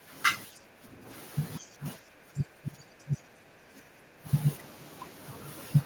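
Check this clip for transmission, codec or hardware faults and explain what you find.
Two echo-canceller faults are present. The background is gated by the echo canceller from 0.0 to 0.09 s and 0.51 to 1.05 s. The microphone is pulled down about 9 to 10 dB, so the room sound dips.

Speech dips or cuts out at 1.8 to 1.85, 2.33 to 3.19, 3.44 to 3.53 and 3.98 to 4.28 s. The drops run from mild to very deep. The likely cause is speech suppressed in double talk.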